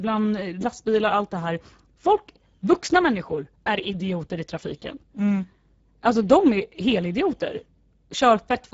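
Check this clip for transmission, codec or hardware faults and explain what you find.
There's one codec fault here, and it runs through the whole clip: Speex codec damage. It's plainly audible from start to finish. Speex is a CELP codec, and at a low setting it has too few bits to model the excitation properly, so the speech comes out noisy and hoarse. Nothing gets through above 7.7 kHz, and the band above 4 kHz is just shaped noise-like fill. That points to a low bitrate, somewhere around 10 kbps.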